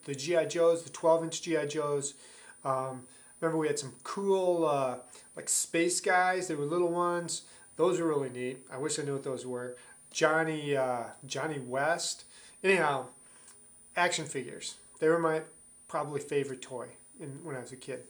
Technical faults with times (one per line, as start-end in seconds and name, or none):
0.00-18.10 switching supply whistle